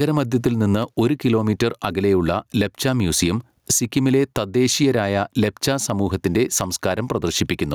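Gain pumping runs from the start. The gain swings by around 10 dB, ducking under loud speech. The likely cause is input gain set far too high, with a fast limiter clamping down.

Between 0.63 and 1.03 s come three CD scratch ticks. The longest is a millisecond or so. A blemish wiped out data beyond the error correction's reach, once per disc turn, and the player patched over it.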